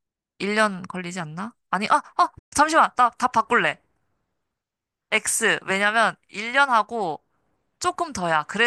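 At 2.38 s the speech just drops out and stays silent until about 2.53 s, a gap of roughly 126 ms, before carrying on. That's a playback stall, most likely the player running dry of data or its thread getting blocked briefly.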